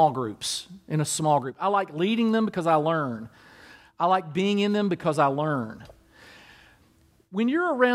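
Nothing goes wrong anywhere in this speech recording; there are no faults to point to at any moment.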